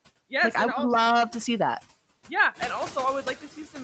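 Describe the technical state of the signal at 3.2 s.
Noise suppressor artifacts are present at 3.2 s, as throughout the clip. Bands judged to be steady noise are cut by about 16 dB frame by frame, and with the room noise louder since around two and a half seconds, the noise sinks between the words and rises under them.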